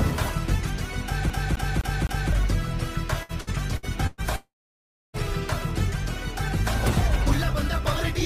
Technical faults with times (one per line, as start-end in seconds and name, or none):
1.30-2.33 CD stuck on one turn
3.23-4.21 repeated packet loss (robotic sound)
4.36-5.17 long network dropout